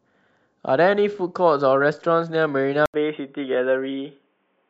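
At 2.86 s an 80 ms gap precedes duller, boxier speech with nothing above 3.6 kHz, likely an input switched to a poorer device.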